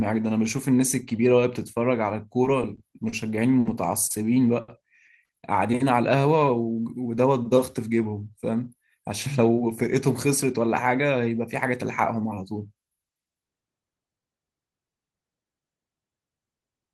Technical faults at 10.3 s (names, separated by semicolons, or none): jitter buffer speed-up